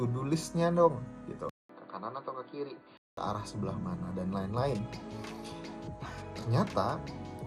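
From 1.49 to 3.17 s the audio turns dull and slightly quieter after a brief gap, likely an input switched to a poorer device. A spectrogram shows a narrower band, and the waveform shows a 200 ms flat gap.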